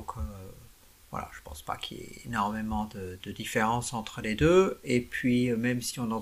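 No technical faults can be heard anywhere in this clip.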